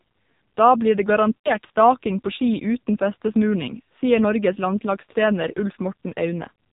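Throughout, the speech carries heavy AMR narrowband mobile codec damage: nothing above 4 kHz, and a buzzy, synthetic tone that points to a low AMR-NB rate near 5.9 kbps. From 1.38 to 1.55 s, between "blir det" and "staking på", lost AMR speech frames leave the decoder repeating stale settings, so the sound smears and fades for about 60 ms, which fits three 20 ms frames.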